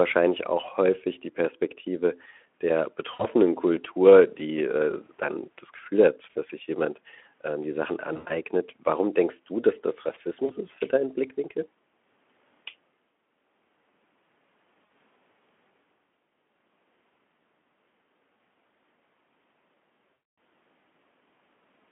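Speech carried through a Speex call with narrowband line tone shows VoIP packet loss concealed by the speech codec. Dropouts occur at 3.13, 6.30, 8.13 to 8.35, 10.45, 14.85 and 20.13 to 20.37 s. Each gap is smeared into a fading buzz or coloured noise as the decoder repeats its last pitch and filter. The longest, at 20.13 s, stretches about 240 ms, consistent with a dozen lost 20 ms frames. Sound stays weak briefly afterward.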